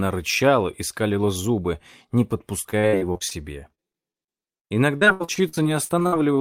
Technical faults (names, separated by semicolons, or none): repeated packet loss (robotic sound)